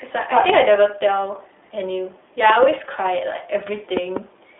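From the start, the speech carries iLBC codec damage. A narrowband coder rebuilds each 20 ms frame on its own, leaving a rough, synthetic edge. On a spectrogram, nothing shows above 3.8 kHz.

A loud pop strikes at 0.50 to 0.52 s, and a double pop follows at 2.50 to 2.65 s, each about 20 dB above the speech. They are likely electrical steps or switching glitches, and appear as tall, narrow waveform spikes and full-height vertical lines.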